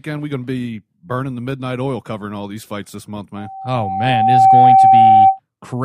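A speech clip with loudspeaker feedback squeal. Right after "these fights this month", at 3.36 s, a single tone near 772 Hz starts to rise. It swells over about a second and holds to 5.40 s. At its peak it sits roughly 15 dB above the speech. The microphone is picking up its own loudspeaker. At 772 Hz the loop gain exceeds one, so that frequency keeps feeding itself until the loop is broken.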